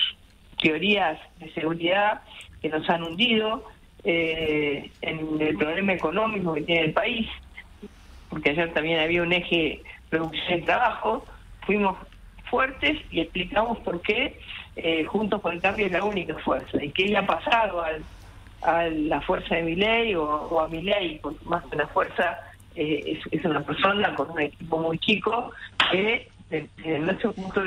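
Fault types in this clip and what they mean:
Adaptive stream at a lower bitrate: the player switched to a leaner encoding from 25.17 s, so everything above 9.9 kHz vanishes abruptly, without a gap.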